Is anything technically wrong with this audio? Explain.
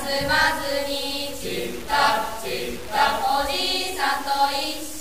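Yes. Throughout the clip there is grainy distortion that follows the signal and sits roughly 15 dB below it. The likely cause is low bit depth without dither, truncated to around 5 bits. Unlike steady hiss, the grit vanishes in silences.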